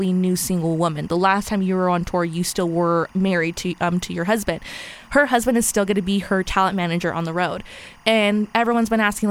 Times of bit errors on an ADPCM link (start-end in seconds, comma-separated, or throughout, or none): none